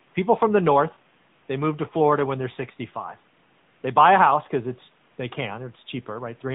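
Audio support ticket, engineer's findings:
AMR narrowband mobile codec across full length of speech. Path sampled at 8 kHz, so nothing above 4 kHz survives; dull, boxed-in tone. Vocal-tract model driven by sparse pulses per 5 ms subframe gives audible buzz and synthetic edge, consistent with a mid-rate mode near 10 kbps. Codec damage plainly audible throughout. Room noise sits about 38 dB under speech, faint, and picks up warble through codec.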